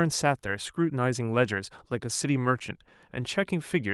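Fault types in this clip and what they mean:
No fault types are present in this clip.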